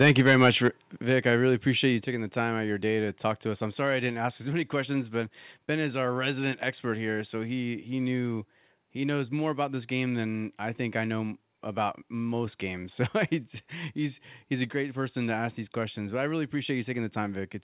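From 0.01 to 0.68 s the speech has a harsh, crackling edge on its loudest peaks, likely microphone overload: input gain about 6 dB too hot, flattening the tops of a few percent of samples. Unlike codec distortion, the crackle follows only the loudest moments.

At 0.02, 1.02 and 2.04 s the level drops abruptly, by about 2, 6 and 4 dB. These are microphone volume step-downs, likely the call software cutting input gain after the clipping. Voice and background fall together in single steps, which distinguishes them from a gradual fade or noise gate.

The call path's narrowband limit, with nothing above 4 kHz, fits a G.711 call.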